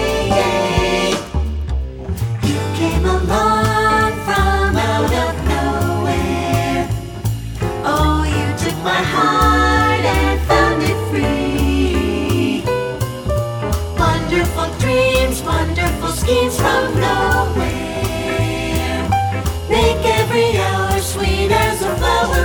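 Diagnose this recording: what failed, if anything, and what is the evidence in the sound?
Nothing failed: there is no fault to diagnose, and no evidence in the sound points to one.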